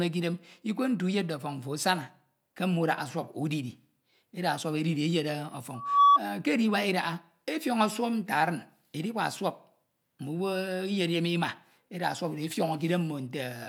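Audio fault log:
5.74–6.19 s, loudspeaker feedback squeal: a single tone near 1.1 kHz rises out of the speech over roughly a third of a second and sits about 10 dB above it. The mic is hearing its own loudspeaker, and at that frequency the loop gain tops one, so it feeds on itself.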